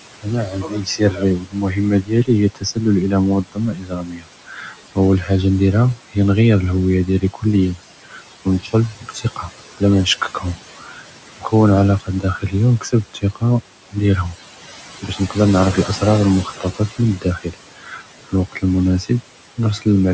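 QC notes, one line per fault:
Throughout: noise suppressor artifacts. The room noise, sitting about 15 dB below the speech, is pulled down by about 17 dB in the gaps and lets back in under speech. The frame-by-frame band gating leaves the remaining background rising and sinking with the words.
0.22–5.29 s and 7.07–19.86 s: speech cut by the noise suppressor. Across roughly two and three seconds respectively, the suppressor treats quiet speech detail as noise and dips it by up to about 19 dB and 17 dB, so soft consonants and word endings sound swallowed or faint.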